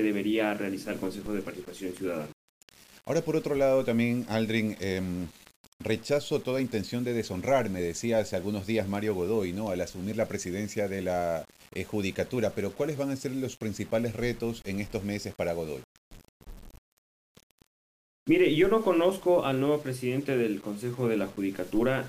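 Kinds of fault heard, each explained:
Low bit depth without dither: grainy distortion follows the sound throughout, about 25 dB down, harshest on quiet parts; likely 7-bit rounding with no dither.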